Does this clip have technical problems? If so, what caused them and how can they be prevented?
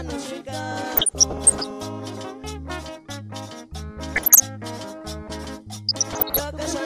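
Yes: DAB burbling at 0.90–1.71 s, 4.16–4.40 s and 5.88–6.41 s. Bit errors of under one percent slip past error correction and corrupt MP2 sub-band data, putting short blips of noise in single bands, seen as scattered short blocks in isolated spectrogram bands. Better antenna placement or stronger reception prevents it.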